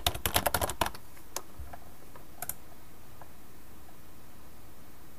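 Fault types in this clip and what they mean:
chunks out of order: Between 1.86 and 2.60 s, two neighbouring blocks of about 0.37 s trade places, so the later block plays first. Unlike a dropout or skip, nothing goes missing. The sound is jumbled rather than gapped, with three hard joins.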